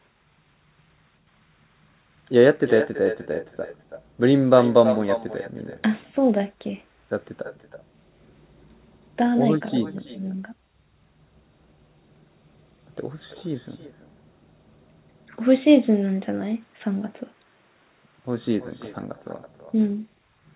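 Speech over a call where no echo canceller removes the far end's loudspeaker pickup, so each phrase returns roughly a third of a second later as a thinner copy about 12 dB down. This echo with no canceller runs throughout, over narrowband audio that stops at 4 kHz, which fits a telephone codec.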